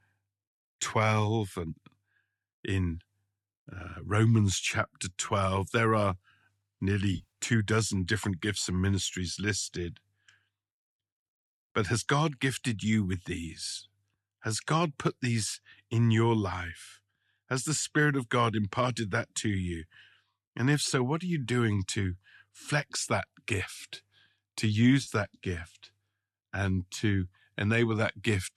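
Dropped AAC frames, filled in by the decoder's concealment from the last good spectrum, damage this speech recording twice. From 7.14 to 7.27 s, just before "two dozen different gifts", about 110 ms of audio was lost in short bursts scattered over roughly 180 ms, none much beyond 40 ms. The sound smears into a brief noisy, phasey patch rather than dropping out. At 25.03 to 25.10 s, between "flex that gift to" and "that gift", a 40 ms loss leaves a similar short blur. Light coding damage throughout is likely from low-delay AAC coding.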